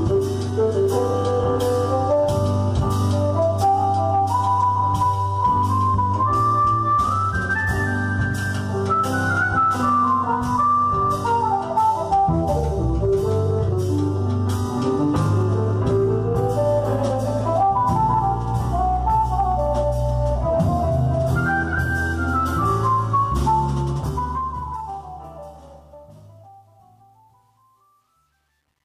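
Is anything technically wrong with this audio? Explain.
Yes. From 23.73 s to the end at 28.85 s there is truncation distortion on a fade: the stage carrying the fade-out keeps too few bits and adds no dither, so the decaying waveform falls onto coarse square steps, consistent with roughly 10-bit resolution. The tail turns gritty, and from 25.93 s to 28.85 s it is at its worst. Unlike steady hiss or codec smearing, the distortion grows as the level falls.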